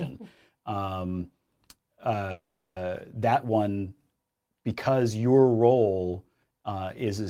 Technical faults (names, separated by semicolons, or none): call audio freeze